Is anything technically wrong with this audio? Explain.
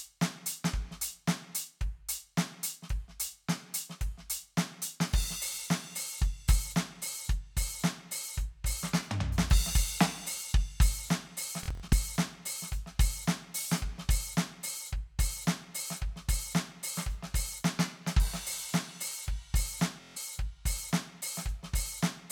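Yes, there's Bluetooth stutter in the music at 11.64–11.93 s and 20.02–20.17 s. Packets are lost, so the receiver loops its last buffer into a brief machine-gun buzz, then skips ahead.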